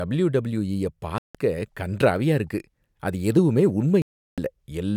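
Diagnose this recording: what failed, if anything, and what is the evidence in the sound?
Playback failed over the wireless link: speech cuts to silence from 1.18 to 1.35 s (165 ms), just before "கண்றாவியா இருக்கு அது எதுவுமே", and from 4.02 to 4.38 s (358 ms), just after it. This is likely a Bluetooth stall, where delayed packets emptied the headphone buffer until resends arrived.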